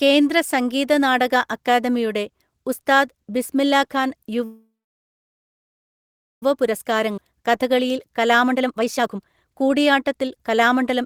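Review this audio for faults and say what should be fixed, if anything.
From 4.44 to 6.43 s the sound stalls, fades to silence for about 1.7 s, then resumes intact: a call audio freeze, likely from delayed packets starving the jitter buffer.

From 6.64 to 11.0 s the audio runs hurried at unchanged pitch, about 114% speed: jitter buffer speed-up, trimming roughly 0.7 s of pitch periods to shed the built-up delay.

At 7.17 s playback jumps abruptly forward, losing about a second of audio: a skip ahead, where a stretch was dropped either in transit or by the overfull buffer while later audio was already waiting.

To prevent these, stabilise the network path so packets arrive steadily, and tune the jitter buffer's size and catch-up behaviour to recover more gently from bursts.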